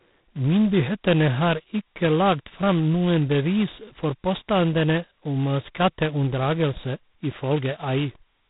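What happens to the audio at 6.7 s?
At 6.7 s the speech is still running through the G.726 ADPCM coding that covers the whole clip. Each sample carries only a coarse difference from an adaptive prediction, which fits 16 kbit/s, so a harsh, rasping hiss rides on the speech, tracking its level. Nothing passes above 3.9 kHz.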